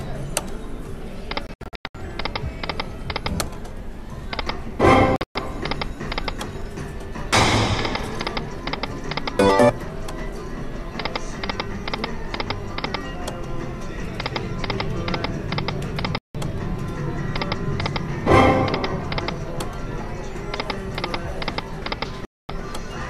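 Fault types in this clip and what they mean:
Digital broadcast dropout: the receiver stopped getting clean frames and muted until good ones arrived again, so those bits of programme are simply gone. You hear four: at 1.47 to 1.95 s it stutters through several short holes, about 336 ms lost in all, the longest 96 ms; at 5.16 to 5.36 s there's a 120 ms gap among 168 ms lost in all; then dropouts around 16.18 s (168 ms) and 22.25 s (240 ms).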